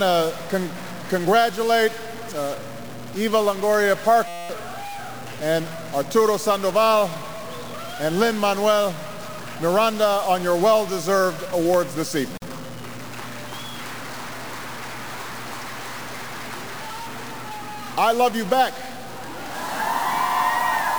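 From the very start and right through to the end, there's a distortion riding on everything, and the quiet stretches don't go properly quiet but fill with a noise floor of their own. That's the signature of a stuck bit, most likely one line of the converter or data path jammed at a fixed value, so roughly half the samples get knocked off by that bit's weight, and any near-zero signal flips it back and forth into noise.

Then at 4.28 s the sound suddenly freezes into a steady buzz until about 4.49 s. That's a system hang loop. The machine or driver stalled while the audio hardware kept replaying the same tiny slice of its ring buffer. The slice is only 5.8 ms long, which fits a 256-sample buffer, repeated about 37 times, so you hear a 172 Hz drone instead of a stutter. Around a fifth of a second of real audio is simply gone underneath it.

Later, from 12.38 s to 12.42 s, there's a short hole of about 45 ms right in the middle of continuous sound, with edges smeared by the codec, and then the sound just picks up where it left off. 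That's a gap at a join of encoded pieces. Two separately encoded chunks were butted together without trimming, so one encoder's start-up delay and the other's padded final frame both stayed in as silence.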